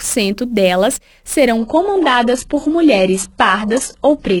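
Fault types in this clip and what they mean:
Sample clock jitter: The converter's clock wobbles by something like several microseconds, so each sample lands a touch early or late. That timing error matters most where the waveform moves fast, so you get a grainy hiss riding on the louder, brighter parts, sitting roughly 25 dB below the signal. It runs through the whole clip, and it drops away whenever the sound goes quiet, since a flat waveform gives the timing error nothing to work with.
Adaptive stream at a lower bitrate: At 1.57 s the stream suddenly switches down and stays there to the end. There's no gap, just an abrupt loss of quality. Everything above 11.5 kHz disappears, and the top end that's left takes on that synthetic, swishy character of heavy codec work. It sounds like the player dropped from a decent AAC rate to a very thin HE-AAC stream, the kind of fallback you get when the connection slows.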